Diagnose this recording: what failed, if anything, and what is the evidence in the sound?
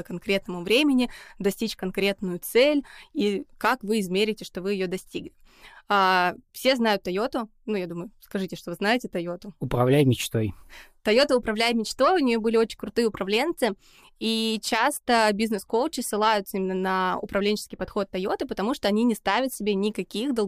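Nothing in the speech recording points to a failure at any stage of the chain. No moment in the audio calls for a diagnosis.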